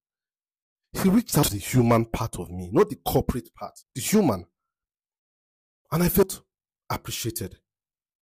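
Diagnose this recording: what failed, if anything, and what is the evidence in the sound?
The sound skips three times, at 1.43, 3.83 and 6.23 s. Each time about a tenth of a second is gone, and the two sides butt together with no silence between them. The skips come at a steady 2.4 s spacing. That regularity points to the capture chain, at the driver or buffer stage. The likely cause is audio missing between chunks. The recorder writes in blocks of about 2.5 s and drops a short piece each time it closes one block and opens the next.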